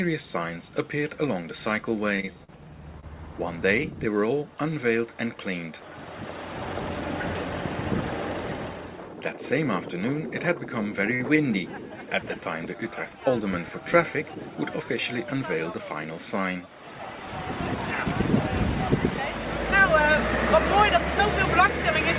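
From 2.16 to 3.05 s there is repeated packet loss, with a robotic sound. Five holes open in quick succession. Each is patched by extending the previous sound, so the passage turns choppy. About 80 ms of audio is gone. The longest hole lasts 42 ms.

At 11.14 s a short stall from a late packet occurs. The jitter buffer ran dry, so the last sound is held for 56 ms until the packet arrives. A second stall at 11.36 s holds for 20 ms. Nothing is lost, but both moments drag with a faint buzz or dip.

From 14.24 to 15.33 s a jitter buffer speed-up trims excess delay. Tiny slices of a pitch period or so are cut repeatedly, removing about 70 ms in total. The sound plays at 105% speed without a pitch change, so it feels slightly rushed. Throughout, the call path passes nothing above 4 kHz, which fits a G.711 A-law telephone codec at 64 kbps.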